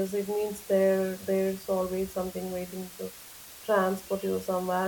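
From start to finish the speech sits on a constant, even hiss, roughly 20 dB below the speech, which fits low bit depth with dither at around 6 bits. So few levels remain that rounding error would be large, but the added dither turns it into steady white noise with no distortion. On a spectrogram this shows as a uniform grey wash across all frequencies, filling the pauses; the waveform never returns to a flat line.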